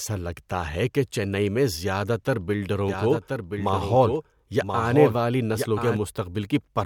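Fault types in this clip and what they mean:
Doubled audio track: A second copy of the speech runs underneath the original from 2.89 s to 5.97 s. It trails by about one second and sits roughly 5 dB below the main signal. The copy is full-band and dry, with no decay or room colour. It switches on and off abruptly at both ends. The likely cause is the same audio being captured again through a slower path and mixed back in.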